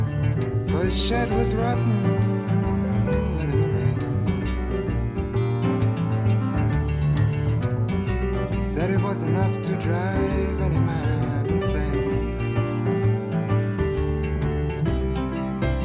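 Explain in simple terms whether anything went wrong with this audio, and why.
Nothing went wrong here.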